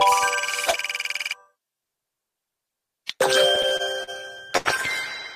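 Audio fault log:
3.55–4.68 s, repeated stalls (stutter): the jitter buffer ran dry eight times as packets arrived late, and the receiver stretched the last sound to cover about 195 ms in all, the longest hold 78 ms, so the audio drags and stutters without losing anything.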